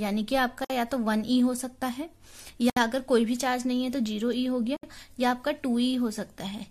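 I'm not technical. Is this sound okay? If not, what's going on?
No. Brief silences cut in at 0.65, 2.70 and 4.77 seconds, each about 50 to 70 milliseconds. This is a gap at a join of encoded pieces. Two-second chunks were joined with their built-in padding silence left in.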